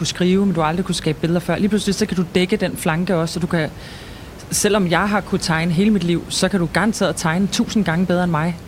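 Nothing goes wrong in this bit of speech, and the only thing underneath it is the ordinary room noise sitting about 18 dB below the talking.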